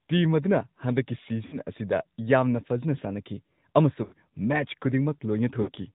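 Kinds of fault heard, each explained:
AMR narrowband mobile codec: The speech went through the 2G/3G mobile codec, which rebuilds it from a vocal-tract model fed by sparse pulses. This gives a plainly audible buzzy, synthetic edge that fits a mid-rate mode near 10 kbps. A spectrogram shows a hard ceiling at 4 kHz throughout.
lost AMR speech frames: At about 1.46, 4.04 and 5.62 s, corrupted frames were concealed by reusing the last pitch and tract settings at falling gain. The speech stretches and fades for 60 to 80 ms, then returns rough. The waveform shows decaying repetition, and the spectrogram shows smeared, frozen harmonics.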